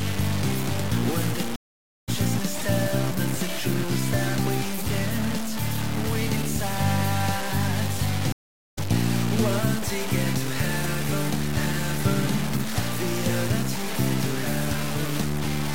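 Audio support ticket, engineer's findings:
Grainy, buzzing distortion throughout, tracking the signal; quiet passages sputter or drop out. Error roughly 10 dB below signal. Likely low bit depth without dither, consistent with 4-bit truncation. Waveform: coarse staircase levels. Spectrogram: smeared, signal-correlated noise across the band.

Stream reconnect, 1.56–2.09 s: about 0.52 s dead silence, then audio resumes roughly 0.4 s further on. Player/network layer dropped and restarted the decoder mid-stream. Waveform: flat gap, abrupt or faded restart. Spectrogram: blank column, content discontinuous across it.

Stream reconnect, 8.32–8.78 s: about 0.45 s silence, resumes roughly 0.3 s later. Same mechanism: connection loss, fresh decoder. Waveform: flat gap with possible short fade-in on resume. Spectrogram: blank vertical band, mismatched content either side.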